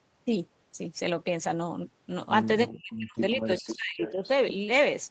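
At 1.43 to 1.45 s there is a brief rough, noisy patch lasting about 20 ms, with no gap. This is a lost packet rebuilt from error correction: one packet was dropped, and the decoder played the low-bitrate copy carried in the next Opus packet.

From 2.7 to 4.23 s the talker's voice dips and drops out in pieces, for about a second in total, at worst falling by around 40 dB. This is speech suppressed in double talk, likely from an echo canceller that turned down both its own talker and the loudspeaker echo while they overlapped.

At 3.58 to 3.75 s and again at 4.01 to 4.28 s, a copy of the voice trails it by about 0.4 s, roughly 10 dB and then 15 dB below the speech. This is echo leak, likely from a loudspeaker on one end whose echo canceller let part of its microphone pickup return down the line.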